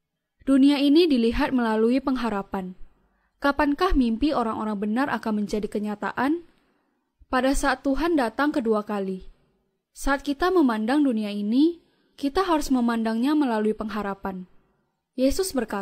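No technical faults can be heard anywhere in the recording.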